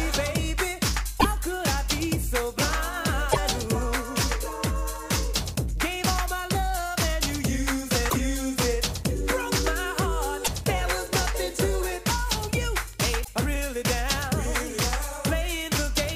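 Damaged data in a compressed stream at 1.16–1.26, 3.28–3.38, 8.06–8.14, 10.41–10.48 and 13.21–13.29 s: corrupted frames make the decoder misread them and lose sync, producing a brief chirp, squawk, click or short hole of 70 to 100 ms each time.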